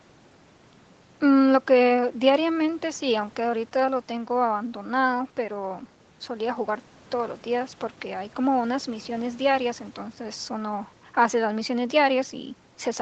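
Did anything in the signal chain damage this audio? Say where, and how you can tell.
No, the speech shows no damage anywhere in the chain; the absence of content above 8 kHz is simply the expected band limit of the call microphone processing and an Opus wideband link, and its coding texture fits a bitrate of around 20 kbps.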